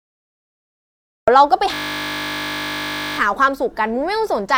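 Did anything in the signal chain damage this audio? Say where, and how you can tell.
Yes. Recording or capture started late, a cut-off start. The clip holds digital silence until 1.28 s, then the speech begins abruptly partway through a sound, with no natural onset or fade-in, because the stream was joined after the sound had already begun.

A system hang loop occurred at the driver or buffer stage from 1.74 to 3.18 s. The host stalled while the audio hardware kept replaying the same 20 ms stretch of its ring buffer, 72 times over, so the speech gives way to a steady 50 Hz buzz.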